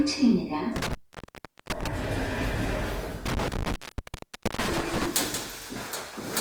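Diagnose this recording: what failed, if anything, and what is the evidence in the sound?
Codec stage: the sound turns grainy and rough rather than swirly, with bandwidth still reaching 20.2 kHz. This is likely Opus compression in music mode near 24 kbps, not MP3 holes.

Analogue wiring: an intermittent contact opens in two bursts, 0.76–1.87 s and 3.26–5.06 s, cutting out for 0.77 s and 0.83 s. Crackle at the edges sets it apart from clean network dropouts.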